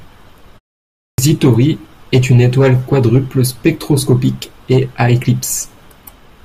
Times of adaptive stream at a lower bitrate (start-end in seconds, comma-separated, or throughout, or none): none